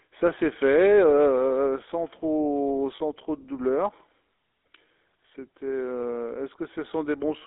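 Throughout, the speech has passed through the GSM full-rate codec, which models the vocal tract and drives it with a pulse excitation that keeps only a third of its samples. The line band runs about 300 Hz to 3.6 kHz, consistent with a 13 kbps link, and the result is a plainly audible buzzy, gravelly roughness.

From 2.96 to 3.01 s, lost GSM frames were concealed by repeating the last good frame's settings. The 40 ms gap, consistent with two dropped frames, becomes a brief rough, metallic ring where the speech should continue.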